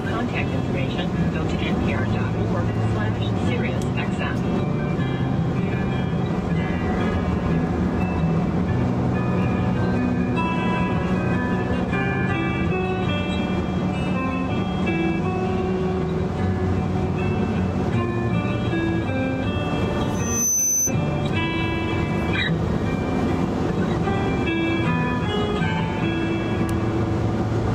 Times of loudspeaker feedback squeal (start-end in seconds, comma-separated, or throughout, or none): 20.14-20.93